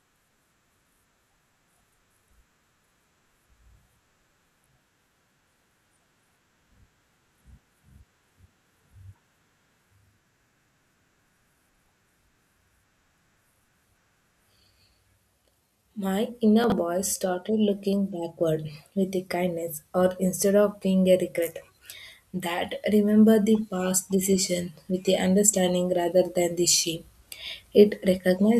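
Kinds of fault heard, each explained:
Chunks out of order: One 20 ms block of audio reached the output three blocks late, so it played after the three blocks that should have followed it. Nothing was dropped, but the sequence was shuffled and three abrupt joins were created between mismatched pieces. Between 16.64 and 16.72 s, just before "voice started looking backward", the speech briefly sounds scrambled.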